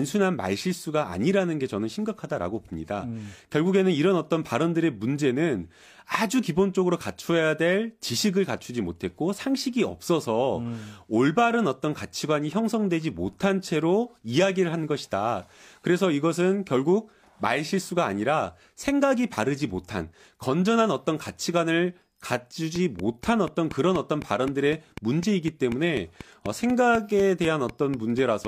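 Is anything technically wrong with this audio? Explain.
Yes. A train of clicks runs from 22.76 s to 28.46 s: about twenty near-identical, regularly spaced pulses at 4 per second, standing well above the speech, likely from electrical interference or a faulty connection or power supply.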